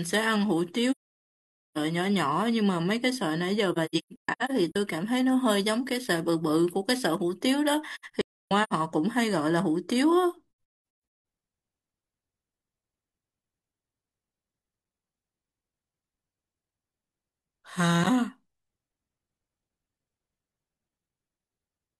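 AAC frame loss with muting strikes four times in this speech. From 0.91 to 1.77 s roughly 850 ms drops to silence in one block. Scattered holes follow at 3.72 to 4.76 s (longest about 150 ms), 7.95 to 8.73 s (longest about 300 ms) and near 10.59 s (longest about 200 ms). The lost frames' spectra were zeroed, so overlapping windows fade the sound out and back in. A spectrogram shows blank vertical bands with soft edges, and the waveform shows tapered gaps.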